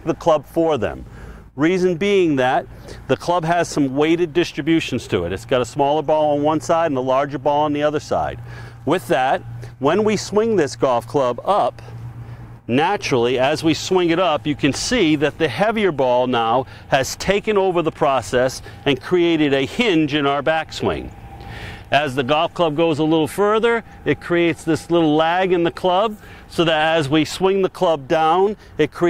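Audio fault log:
Nothing in the clip registers as a fault. There is no event to log against any time.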